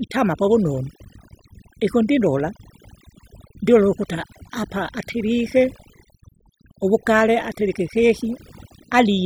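From the first second to the end, a steady 50 Hz mains hum sits about 30 dB under the speech. It is a fixed pitched tone with low harmonics, not broadband hiss or rumble, so it points to a ground loop or nearby transformer. Throughout, overdone noise removal has driven individual frequency bands toward silence. That leaves a hollow background with twinkling specks, unlike codec smearing, which follows the speech rather than the noise floor.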